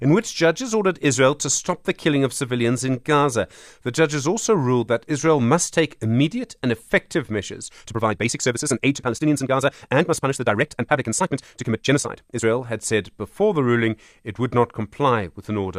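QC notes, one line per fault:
7.68–12.44 s, time-stretched section: the speech abruptly runs at roughly 1.79 times normal pace while pitch holds steady, sounding rushed. This is likely software compressing the passage to fit a shorter length, discarding short fragments to preserve pitch.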